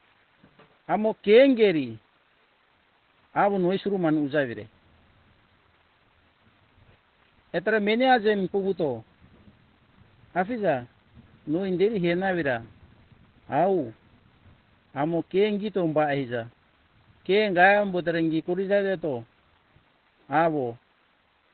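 A speech clip with heavy damage throughout: nothing above 4.4 kHz, and the sound is muffled and hoarse. The likely cause is Opus compression in its narrowband SILK speech mode, consistent with a low rate of around 12 kbps.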